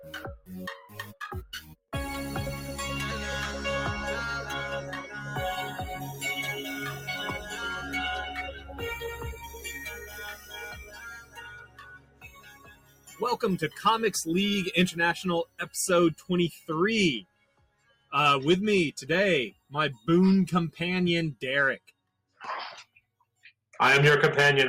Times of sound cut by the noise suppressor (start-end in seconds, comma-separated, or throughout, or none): 0.00-1.93, 6.98-7.51, 8.48-13.82, 15.45-16.69, 17.22-18.12, 19.51-20.08, 21.79-23.69